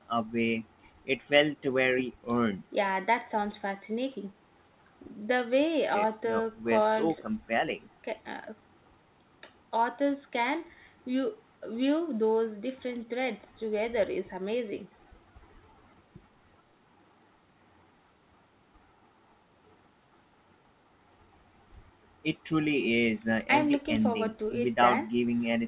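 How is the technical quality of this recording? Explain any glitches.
No glitches turn up anywhere in this speech, which comes over a call line with nothing above 4 kHz, pointing to a narrowband telephone codec along the lines of G.711 mu-law.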